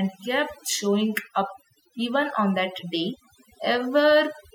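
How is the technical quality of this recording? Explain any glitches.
The recording suffers from overdone noise removal throughout. An aggressive noise reducer cuts frequency bands near its noise estimate hard, taking quiet speech detail with them. The pauses fall to near silence with twinkling specks. A spectrogram would show scattered isolated dots and holes in the speech harmonics.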